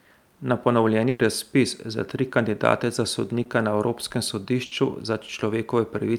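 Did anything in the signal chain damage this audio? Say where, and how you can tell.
Yes. The damage happened on the network, as bursts of packet loss. At 1.09 to 1.21 s, just before "razpis za tri kandidate", about 100 ms of packets never arrived in time. At 4.65 to 4.73 s, about 60 ms went missing. Each time the receiver extended the last sound and let it fade, so you hear a held buzz or decaying hiss. The audio then picks up later, with the stretch in between gone.

There is also a short concealed packet loss at 3.43 to 3.47 s, right after "za tri kandidate za". About 20 ms failed to reach the decoder, and the receiver patched the gap by continuing the preceding sound before crossfading back into real audio. It is too short to hear as a dropout and comes across as a brief smear or wobble, and a quick consonant in that spot can disappear.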